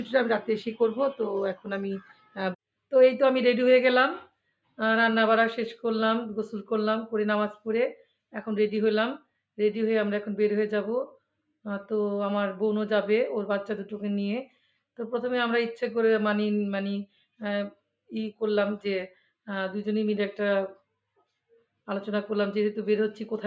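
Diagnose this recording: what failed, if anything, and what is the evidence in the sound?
At 2.01 to 2.38 s the sound sags, falling by about 13 dB, then returns; at 17.06 to 17.41 s a deeper dip of about 17 dB lowers it again. This is sound cut by the noise suppressor in the call processing stage. The suppressor judged these stretches to be background noise and attenuated them harder than the surrounding audio. The call microphone processing itself, with nothing above 8 kHz, is not at fault.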